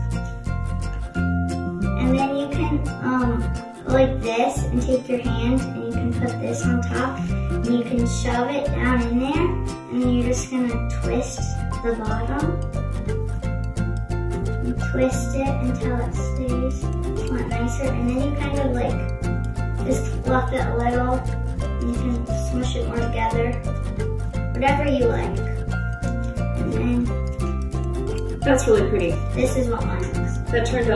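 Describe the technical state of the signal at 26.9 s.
At 26.9 s the signal is intact, with no audible dropout, distortion, glitch or other technical fault at that point.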